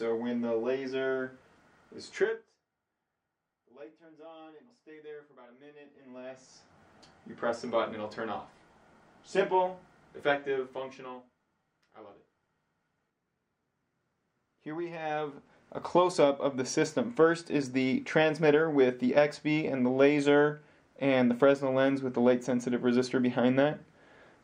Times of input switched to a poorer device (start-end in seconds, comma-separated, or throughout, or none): none